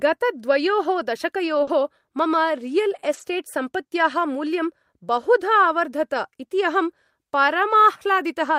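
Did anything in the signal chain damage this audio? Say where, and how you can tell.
Yes. At 1.63 to 1.69 s, just before "मम रियल्", the speech briefly smears and wobbles. This is short concealed packet loss on the network: about 40 ms never arrived, so the receiver extended the preceding sound and blended back into the real signal.

Three short stretches turn rougher and noisier: 1.67 to 1.69 s, 3.13 to 3.23 s just after "मम रियल्", and 7.69 to 7.75 s. Each is a lost packet rebuilt from error correction (one, three and two packets respectively), with the decoder playing low-bitrate backup copies.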